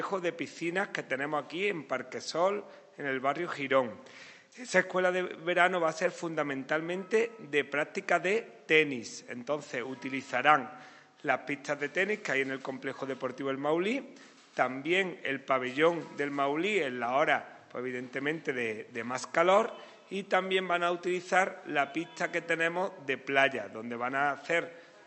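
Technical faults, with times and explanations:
No technical faults can be heard anywhere in the recording, with the signal holding steady and continuous throughout.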